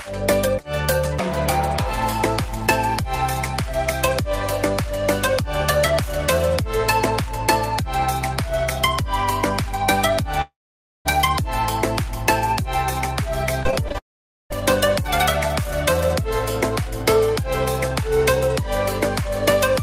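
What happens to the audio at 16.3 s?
Nothing goes wrong at 16.3 s; the audio plays through that moment intact, with no dropout, click, distortion or other fault.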